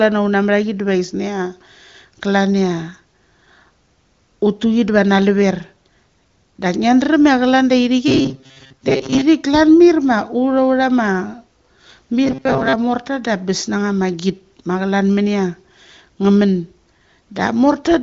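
Robotic sound from repeated short buffers hits this speech recording from 8.08 to 9.22 s and from 12.25 to 12.75 s as a rigid metallic buzz at 133 Hz. The likely cause is audio arriving too seldom, so the last slice of about 7.5 ms is replayed in place of most of the real sound in the first stretch and about half in the second. The clip comes through the AMR wideband (HD Voice) codec, with nothing above about 6.8 kHz.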